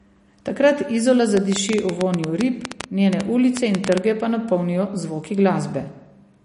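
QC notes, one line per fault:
Throughout: MP3 compression. The speech sounds watery and swirly, with smeared consonant onsets and dull treble, since nothing remains above 10.6 kHz. This is likely a low-bitrate MP3 encode, consistent with roughly 40 kbps, cutting the top band and switching weak components on and off between frames.
1.37 to 3.99 s: train of clicks. About twenty sharp ticks of similar shape arrive at an uneven pace, averaging 8.45 per second and standing out well above the speech, ending just before "pa napolnijo zvoki". Interference or a faulty connection is the likely source of the pulses.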